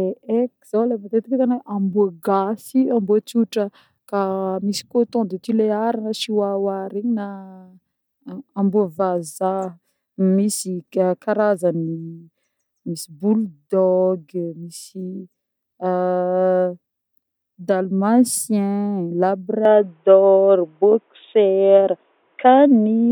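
Speech, with one fault. At 19.65 s the sound abruptly turns dull and boxy until the end, with nothing above 3.8 kHz. The level shifts by about 5 dB and a faint new noise floor appears, with no gap. The likely cause is an input switched to a poorer device.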